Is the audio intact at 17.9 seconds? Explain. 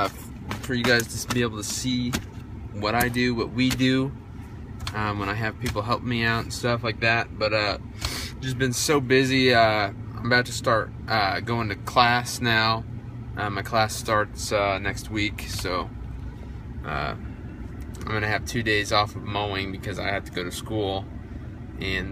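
Yes, at 17.9 seconds the audio is intact, with no dropout, click, distortion or other fault.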